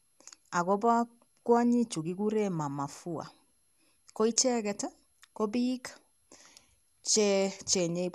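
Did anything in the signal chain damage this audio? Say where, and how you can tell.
Yes: generation loss at the codec stage, throughout the speech. The sound is swirly, hollow and smeared, with blurred attacks and nothing above 12.5 kHz. It is rougher than one pass at that bandwidth explains, likely from around ten lossy re-encodes, consistent with MP2 at 128 kbit/s.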